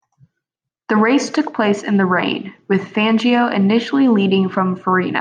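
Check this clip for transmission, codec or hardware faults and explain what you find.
Listening through the speech, I can't pick out any fault worth flagging here, so there's nothing to report.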